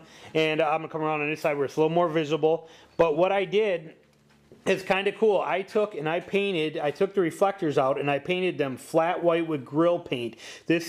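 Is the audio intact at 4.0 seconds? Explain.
Yes, the audio is intact at 4.0 seconds, with no dropout, click, distortion or other fault to be heard at that point.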